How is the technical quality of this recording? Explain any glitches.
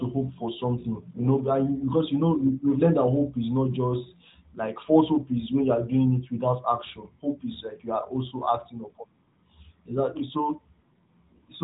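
No glitches or faults can be heard in this speech recording, which comes through a narrowband mobile codec path with nothing above about 3.8 kHz.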